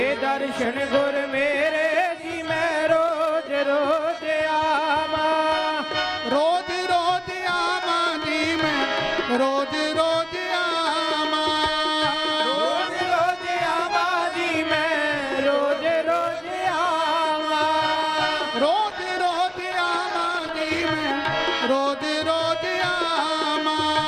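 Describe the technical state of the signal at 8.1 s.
At 8.1 s the signal is intact, with no audible fault at that moment.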